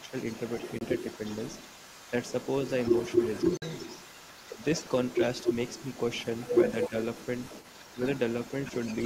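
From the very start and through all of the roughly 9-second recording, a second voice sits under the main talker at only about 5 dB below it. This is the other side's voice leaking through, likely because the far end was played on a loudspeaker and the echo canceller failed to strip it from the microphone signal. Because it is so close in level, it competes with the main speech throughout rather than appearing as occasional scraps.

Between 0.00 and 0.13 s, the main talker dips by about 10 dB for around 70 ms while the two voices overlap. This is speech suppressed in double talk, and the likely cause is an echo canceller that could not separate near and far speech and turned both down. The same dip returns at 4.48–4.62 s, lasting about 150 ms, and briefly at 6.89–6.93 s for about 40 ms, each time reaching roughly 10 dB.

At 0.79 s, the output drops to silence for 23.2 ms, then resumes as though the audio had kept running underneath. 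This is a Bluetooth dropout, the likely result of packets arriving too late for the headphones and being discarded, and the gap length fits a single lost packet. A longer hole of 46.4 ms follows at 3.57–3.62 s, which points to two consecutive packets lost.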